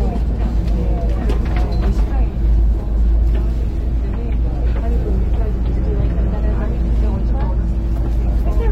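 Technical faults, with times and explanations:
No technical faults can be heard in this recording of sounds. There is nothing here that needs a time or an explanation.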